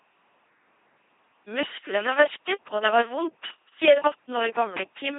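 A speech clip run entirely through an LPC-10 vocoder at 2.4 kbit/s, heavily damaged: buzzy robotic voicing, hiss errors; spectrogram shows rigid harmonic combs, noise bands, nothing above 3.8 kHz.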